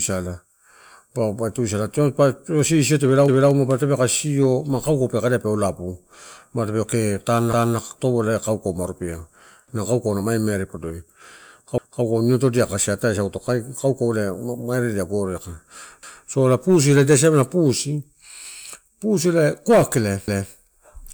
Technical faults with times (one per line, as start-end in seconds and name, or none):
3.28-3.53 overlapping chunks
7.53-7.78 overlapping chunks
11.78-12.03 overlapping chunks
16.03-16.28 overlapping chunks
20.28-20.53 overlapping chunks